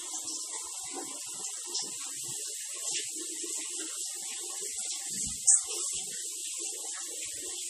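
A recording of everyday sound, likely passed through MP3 compression at a starved bitrate, which fits roughly 40 kbps. The encoder has cut everything above 15 kHz, and weak frequency lines flicker between frames, giving a plainly audible watery swirl and smeared attacks throughout.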